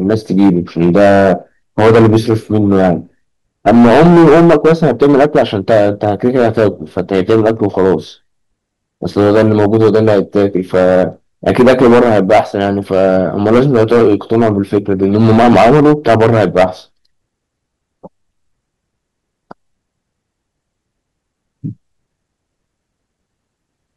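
Speech with hard clipping throughout: the signal is driven about 14 dB past what the chain can pass, so roughly 7 percent of samples hit the ceiling and are cut flat. Those squared-off peaks add high harmonics, giving a harsh fuzz on every loud syllable.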